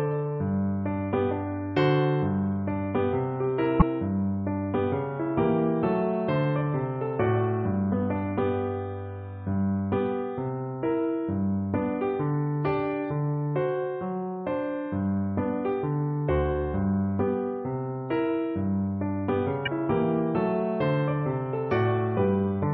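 Damaged data in a compressed stream shows up twice, as brief blips from 3.78 to 3.82 s and from 19.63 to 19.68 s, each lasting about 40 ms. At those points the encoded bytes were lost, zeroed or overwritten. The decoder could not read those frames correctly, lost its place in the bitstream and had to hunt for the next valid frame header. The misread data and the resync produce the short glitch in the audio.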